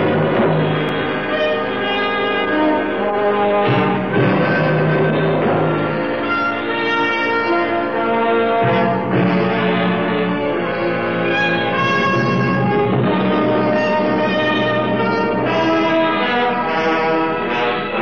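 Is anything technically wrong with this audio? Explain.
No, nothing in the signal points to a technical problem; it stays steady and intact throughout.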